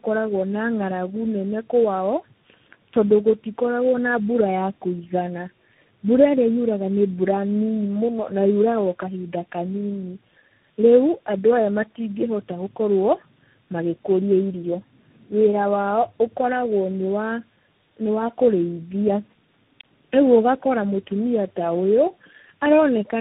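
Speech with tandem speech coding throughout: muffled below 3.8 kHz, rough and warbly, with more buildup than one coder could cause, which fits AMR-NB, G.729A and CVSD in sequence.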